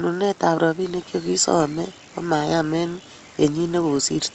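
No technical faults can be heard anywhere in it.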